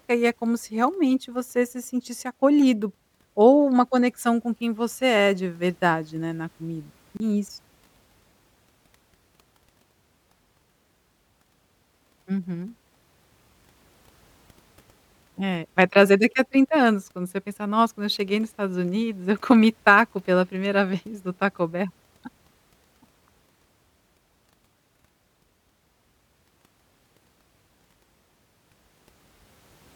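At 7.17 to 7.20 s, just after "verdade né na comida", a gap at a join of encoded pieces breaks the speech. The gap lasts about 29 ms. Separately encoded segments were joined untrimmed, leaving encoder delay and end padding. Edges are smeared, then speech resumes.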